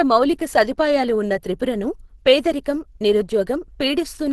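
From start to finish the speech carries Opus compression damage, and it is plainly audible. Nothing reaches above about 12.2 kHz, so the top of the spectrum is cut off. The voice sounds muffled and hoarse, with a grainy edge. That character points to the encoder's hybrid speech mode at a low bitrate, around 16 kbps. Too few bits are being spent, and the encoder likely narrowed the band and simplified detail to cope.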